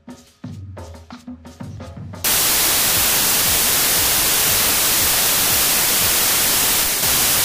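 From 2.24 s right through to the end at 7.44 s there's a wrong sample width fault. The data were written as packed 24-bit integers but read back as 32-bit ones, so every value grabs four bytes from three-byte samples and straddles the boundaries. Only now and then does a real top byte land where it belongs. You get a wall of loud noise with the original sound buried underneath, running 1.33 times too fast and pitched up to match.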